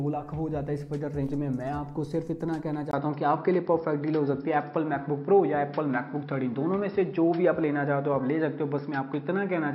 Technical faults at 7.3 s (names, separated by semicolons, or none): input switched to a poorer device